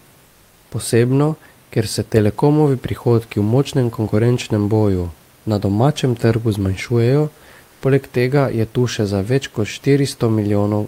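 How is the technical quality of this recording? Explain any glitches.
Two brief glitches occur in pauses in the speech, both comfort noise in place of the background. From 0.25 to 0.71 s (460 ms), and again from 7.67 to 7.81 s (140 ms), the room noise, sitting about 35 dB below the speech, gives way to a steady, featureless hiss. The sender has likely paused transmission during silence (discontinuous transmission, as in Opus DTX), and the receiver has filled the gaps with synthetic noise. The first patch is about 2 dB quieter; the second matches the level. On a spectrogram, the textured background becomes a smooth, uniform band, and the waveform flattens to even, detail-free noise.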